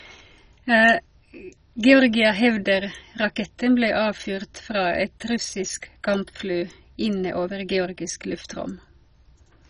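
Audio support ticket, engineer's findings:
MP2 compression, throughout. Speech dull, nothing above 10.4 kHz; gurgling, granular texture. Likely cause: Layer II encoder starving sub-bands of bits, upper bands switched off, survivors coarsely quantised. Heavy damage fits a very low bitrate, around 32 kbps.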